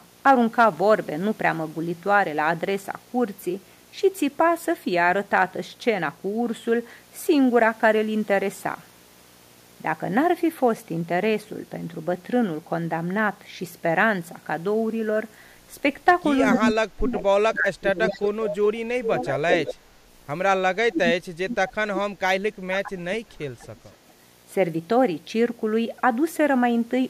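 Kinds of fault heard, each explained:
Video or display buzz: throughout the clip, a 60 Hz buzz with hash above it sits about 35 dB below the speech. It follows the picture's field rate, so a screen or video cable is coupling its signal into the audio path.
Echo leak: at 16.51 s, 18.09 to 18.55 s, 19.03 to 19.24 s and 21.68 s, a delayed copy of the speech returns about 220 ms late, from about 5 to about 20 dB down. The likely cause is a loudspeaker-side echo canceller leaving residue that was sent back.
Speech suppressed in double talk: from 16.58 to 19.76 s, 20.8 to 21.56 s and 21.87 to 23.74 s the speech dips and breaks up, dropping by up to about 30 dB. This is likely an echo canceller turning down overlapping talk it could not separate from echo.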